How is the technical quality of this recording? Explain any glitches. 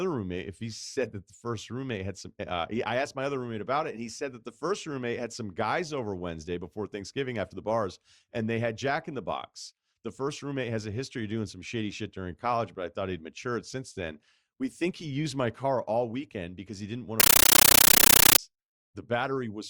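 One serious glitch: from 17.20 s to 18.39 s the speech is replaced by a burst of very loud, harsh chattering static. It is a compressed stream played as audio. An AC-3 (Dolby Digital) bitstream reached the output as if it were ordinary samples, with no decoding. Each frame plays as roughly 13 ms of dense noise followed by silent padding, repeating 31.25 times a second. That rapid on-off pattern produces the buzzy, rattling texture, which fits a 640 kbps AC-3 stream.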